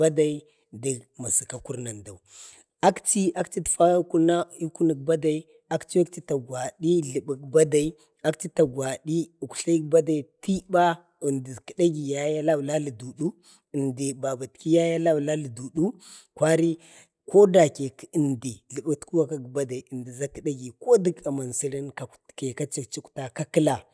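Speech recording, with nothing technically wrong with it.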